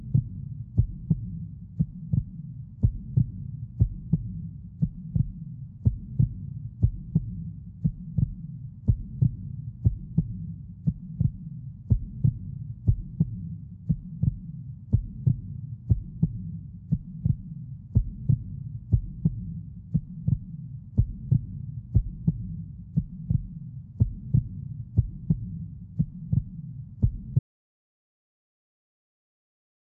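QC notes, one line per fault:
27.39 s to the end: audio dropout to silence. The sound cuts off mid-flow and never comes back, leaving about two and a half seconds of dead silence with no room tone underneath. Whatever was going on after 27.39 s is simply gone. Most likely the input was lost, a device disconnect, a dropped link or a stray mute, while the recorder kept writing empty samples to the end.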